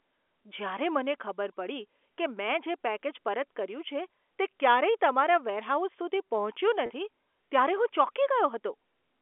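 Packet loss with pitch repetition occurs at 6.86 to 6.90 s in this telephone-band speech, heard through 300 Hz to 3.4 kHz G.711 coding. About 40 ms of audio went missing, which fits two 20 ms packets, and the receiver filled the gap by repeating the last pitch period, so the sound briefly holds with a slightly buzzy tone.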